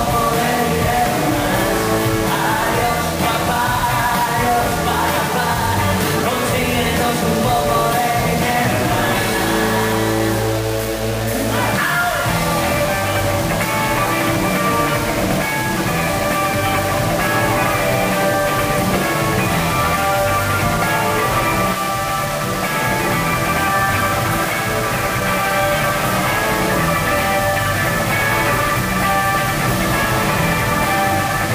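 Low bit depth without dither runs throughout: gritty distortion tracks the sound, roughly 10 dB beneath it, likely from undithered rounding that fits a 4-bit depth.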